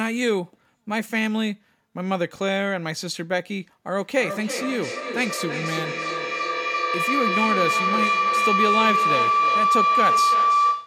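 From 3.98 s right through to the end at 10.86 s, there's a feedback howl creeping in under the speech. A mic and a loudspeaker are feeding each other with more gain than loss on each pass, so instead of dying away the repeats stack up and narrow to a tone around 1 kHz. The repeats come roughly every 300 ms, the loop's round trip, and the howl peaks about 4 dB above the speech itself.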